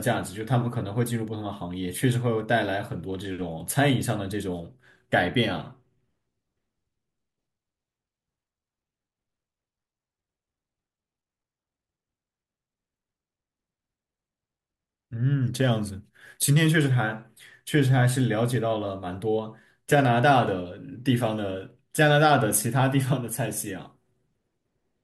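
Listening to the speech here, nothing stood out as a technical fault at any point.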